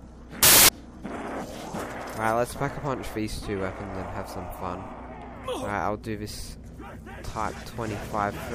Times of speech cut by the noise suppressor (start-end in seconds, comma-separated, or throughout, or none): none